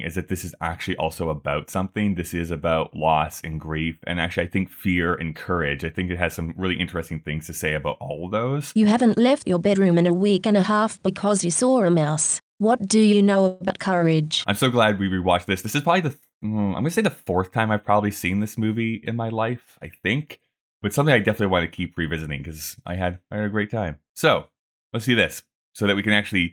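A call audio freeze runs from 13.47 to 13.63 s in this speech recording. For 130 ms the sound stalls and the last fragment is stretched into a fading, buzzy fill, with nothing actually lost. The likely cause is packets held up in transit so the jitter buffer ran dry, leaving the receiver to conceal the wait until delivery resumed and added that 130 ms of delay. A skip ahead follows at 13.68 to 13.72 s, right after "do you know": roughly 70 ms of audio vanishes and the two sides are butted together with only about 5 ms of join. Playback jumps because a stretch was dropped while later audio was already queued, which claws back most of the delay the freeze had built up. Jitter buffer slow-down then sets in from 13.90 to 14.55 s, just before "so glad we rewatched". The speech runs at about 90% speed while keeping its pitch, sounding drawn out. The receiver is repeating single pitch periods and slivers of pause, 72 ms in total, to rebuild a reserve after the buffer ran low or raised its target delay. 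Jitter buffer speed-up covers 15.66 to 17.43 s, between "glad we rewatched this" and "time I've probably seen". Delivery is at about 106% speed with pitch unchanged, giving a hurried feel. Here the buffer was holding more than its target, so short pieces of one or a few pitch periods, around 100 ms altogether, were cut out in quick succession to bring the delay back down.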